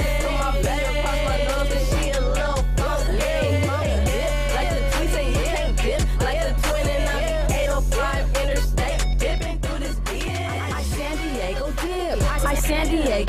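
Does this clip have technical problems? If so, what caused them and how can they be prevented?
Yes, there's a sudden gain jump at 9.38 s: the sound and its background drop together by about 4 dB, then jump back at 12.12 s, likely from a gain change applied without any ramp. To prevent it, smooth every gain change over a few milliseconds.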